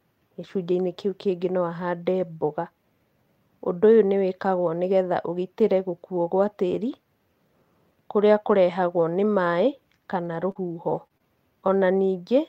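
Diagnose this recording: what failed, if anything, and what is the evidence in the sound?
Brief rough, noisy patches at 10.25, 10.55, 10.89 and 10.97 s, the first right after "kũrĩa kũrehagwo nĩ maĩ": a network fault, lost packets rebuilt from error correction, each 20 ms played from a lower-quality backup copy.

Short smears at 10.51 to 10.57 s (about 40 ms), 11.07 to 11.12 s and 11.18 to 11.22 s: short concealed packet loss, where late packets were filled by extending the preceding sound.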